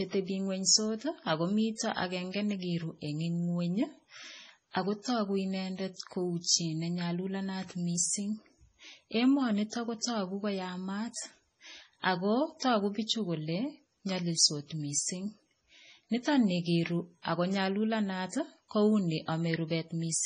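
From start to finish the speech has no content above 10.5 kHz and a watery, swirling quality, with chirpy s sounds and smeared attacks. The likely cause is heavy MP3 compression, whose encoder, starved at what sounds like about 24 kbps, drops the treble and switches weak frequency lines on and off between frames.

At 10.01 to 10.03 s, and again at 13.06 to 13.09 s between "ako tuku" and "kole nyolilsot mising", a brief hiss runs ahead of a sharp onset. This is pre-echo: the coding noise spreads back across 20 ms and 26 ms before each attack, softening it.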